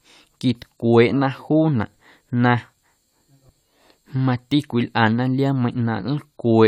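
Speech with no audible faults.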